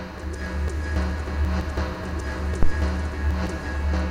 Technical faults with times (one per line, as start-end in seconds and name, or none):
2.63-2.75 phantom power thump